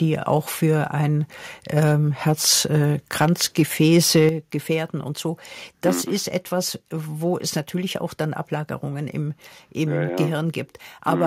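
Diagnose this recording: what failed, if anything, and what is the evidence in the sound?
Harsh crackle hits the speech peaks at 0.3, 1.77, 2.49, 3.2 and 3.59–4.26 s, worst around 3.2 s. That's likely microphone overload flattening peak tops at the converter.

Right after, at 4.29 s, voice and background drop together by about 7 dB. This points to microphone volume stepped down by call processing reacting to those clipped peaks.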